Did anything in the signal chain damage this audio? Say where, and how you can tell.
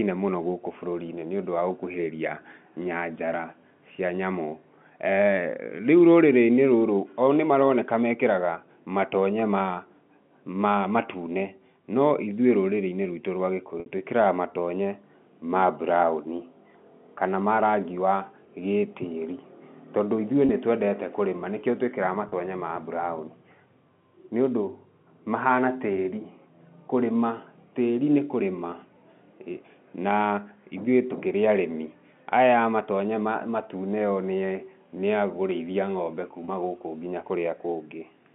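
Yes, network stage: brief held, buzzy blips at 13.80–13.86 s after "rwitũ rwa", 20.46–20.49 s after "wa gĩtĩĩri tondũ ithuĩ", 22.29–22.32 s before "ma mburaũni", and 36.45–36.48 s. This is packet loss with pitch repetition. The receiver repeated the last pitch period across a 60 ms gap, consistent with two lost packets, and 30 ms gaps, consistent with one lost packet, all heard through the narrow G.711 telephone band.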